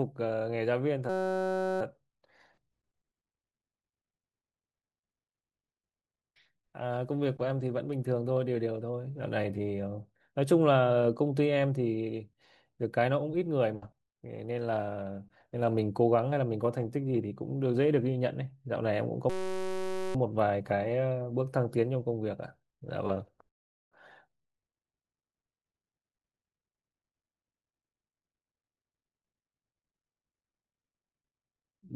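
At 1.09 to 1.81 s and again at 19.30 to 20.15 s, a system hang loop cycles one 5.33 ms chunk, which fits a 256-sample buffer, into a steady 188 Hz buzz.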